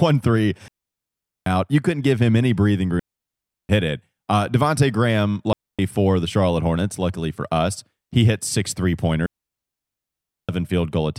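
A digital wireless dropout, where the link lost too much data and the receiver muted, cuts four clean near-silent holes into the speech, with no noise burst on either side: 0.68 to 1.46 s; 3.0 to 3.69 s, between "give him any breathing" and "hit it"; 5.53 to 5.79 s, just before "for the"; and 9.26 to 10.49 s, after "he hit six three".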